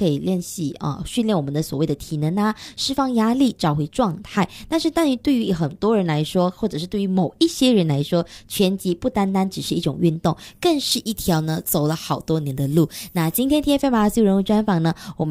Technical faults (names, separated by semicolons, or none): pre-emphasis left on